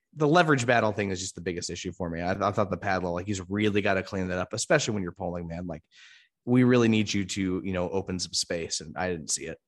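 At 2.35 s a repeated buffer occurs: fresh audio arrived late, so a 5.8 ms slice, which fits a 256-sample buffer, plays three times. It sounds like a brief click or buzz. The waveform shows identical copies with hard joins, which appear as thin vertical lines on a spectrogram.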